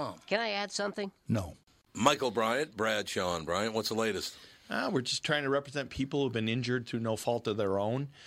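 No technical faults can be heard in this recording.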